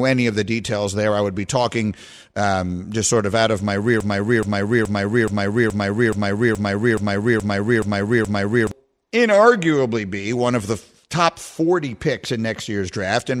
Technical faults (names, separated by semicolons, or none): broken-record loop